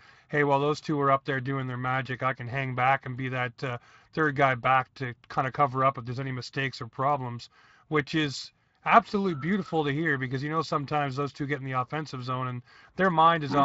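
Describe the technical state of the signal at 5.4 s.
Speex codec damage is present at 5.4 s, as it is across the whole clip rather than starting or stopping there. Speex is a CELP coder: it models the vocal tract with a filter and spends a limited bit budget describing the excitation that drives it. The coarseness of that excitation here fits a bitrate of around 20 kbps. That shortfall is plainly audible at this moment as a rough, grainy speech texture.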